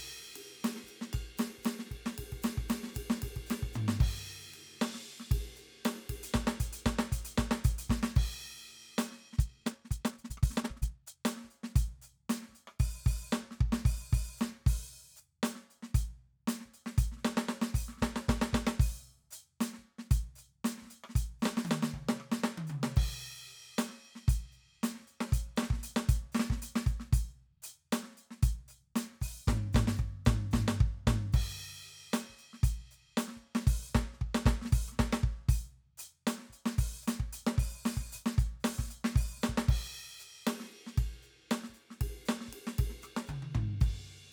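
From 9.28 to 11.20 s the music suddenly rushes ahead at double speed yet holds its pitch, turning hurried before settling back. This time-stretched section likely comes from software squeezing the passage by discarding short slices of audio.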